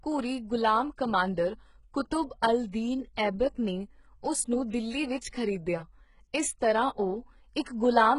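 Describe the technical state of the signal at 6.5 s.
At 6.5 s the speech is still under the HE-AAC compression that runs through the whole clip, likely from an encoder at a very low rate, around 12 kbps by the sound of it. Only the lower spectrum carries real signal. The treble is synthesised by copying those bands upward and shaping them with a coarse envelope, so harmonics fail to line up across the crossover. The damage is heavy: nothing sounds above 11.1 kHz, and s sounds come out gritty, metallic or lispy.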